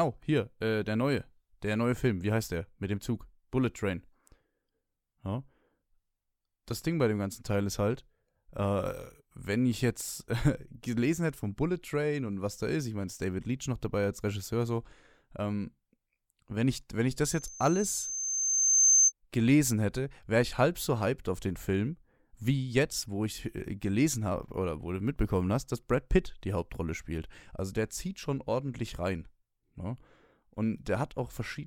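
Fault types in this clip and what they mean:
Loudspeaker feedback squeal: From 17.25 s to 19.12 s, a piercing whistle at 6.3 kHz swells over roughly a second and a half until it sits around 10 dB above the speech, then stops. It happens because the microphone is picking up the loudspeaker it drives, and at 6.3 kHz the round-trip gain through that loop exceeds one, so the tone keeps feeding itself and grows instead of dying away.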